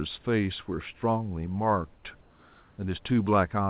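At 1.94 to 2.03 s, and again from 2.21 to 2.78 s, the room's background in the pauses turns flat and featureless, dropping about 3 dB and then about 2 dB, under a background already roughly 31 to 33 dB below the loud parts. This is comfort noise in place of the background, likely from discontinuous transmission: the sender stopped sending in these gaps, and the receiver filled them with synthetic shaped noise, band-limited below 4 kHz like the rest of the call.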